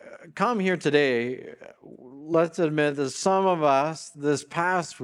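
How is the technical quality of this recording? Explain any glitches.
One glitch stands out. From 2.05 s to the end there is a time-stretched section. The pace abruptly slows to about 0.71 times normal speed while the pitch stays the same, so the sound drags. The likely cause is software stretching the audio to fit a length, repeating short pieces to hold the pitch.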